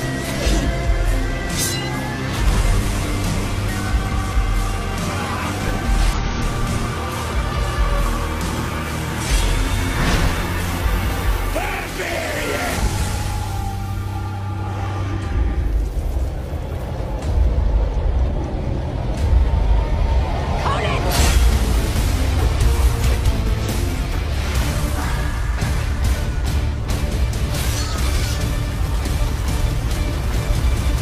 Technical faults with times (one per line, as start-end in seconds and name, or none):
0.42-0.48 damaged data in a compressed stream
2.79 damaged data in a compressed stream
6.13-6.18 damaged data in a compressed stream
18.49-18.52 damaged data in a compressed stream
25.08-25.13 damaged data in a compressed stream